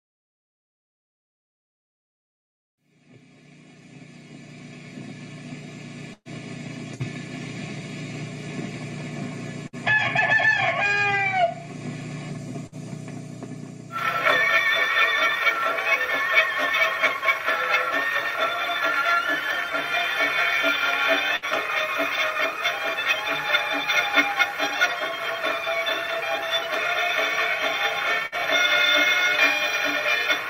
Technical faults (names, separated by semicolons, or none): burst of packet loss